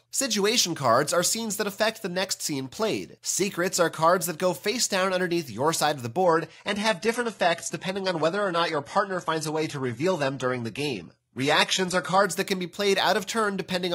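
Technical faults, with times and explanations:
6.24 to 12.24 s, adaptive stream at a lower bitrate: with no gap, the sound abruptly loses everything above 11.8 kHz. That fits the player switching down to a 16 kbit/s HE-AAC version while the connection slowed, then switching back.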